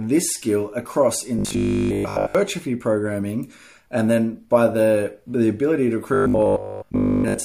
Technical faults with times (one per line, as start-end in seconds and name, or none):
1.39-2.35 robotic sound from repeated short buffers
6.14-7.44 robotic sound from repeated short buffers